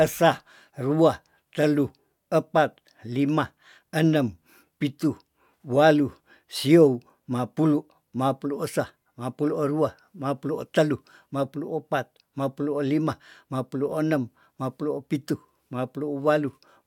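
No faults detected anywhere in the speech recording; nothing to report.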